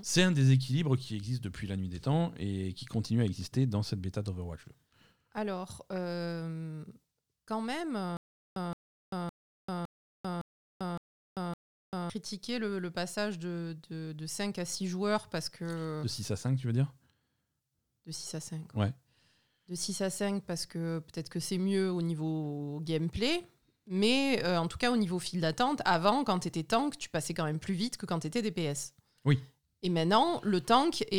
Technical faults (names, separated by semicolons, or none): stutter with silent gaps